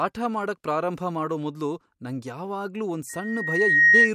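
From 3.09 to 4.12 s, after "ಮೊದ್ಲು ನಂಗ್ ಯಾವಾಗ್ಲೂ ಒಂದ್", a loudspeaker feedback squeal sets in. The microphone–speaker loop rings at 1.9 kHz and swells over under a second to roughly 15 dB above the speech. On the spectrogram it is a bright horizontal line, and on the waveform a growing envelope.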